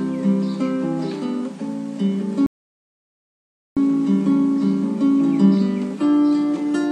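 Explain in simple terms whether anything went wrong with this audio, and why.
A rebuffering stall interrupts the audio from 2.46 to 3.77 seconds. The sound suddenly drops to silence for about 1.3 seconds, then picks up exactly where it left off. This happens when the player plays through all the audio it has downloaded so far and has to wait for more to arrive. Nothing is skipped or lost, but the pause adds about 1.3 seconds to the running time.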